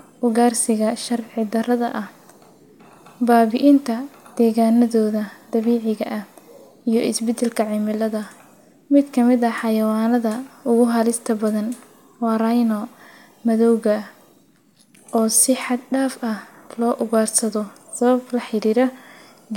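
Nothing goes wrong anywhere in this speech recording, so there's no fault to point to at any moment.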